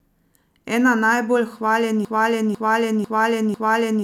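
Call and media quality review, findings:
Broken-record loop from 2.05 s to end: a 0.5 s speech fragment repeats four times back to back, audio for that span lost. Likely player or stream stall resending its last buffer.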